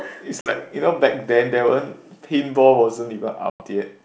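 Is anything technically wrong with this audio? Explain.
Yes. Packet loss on an ADPCM call strikes twice, at 0.41–0.53 s (50 ms of audio lost) and at 3.50–3.62 s (100 ms lost). The missing packets become abrupt silent gaps, and the decoder's predictor and step size drift from the sender's, so the speech resumes slightly distorted before resettling.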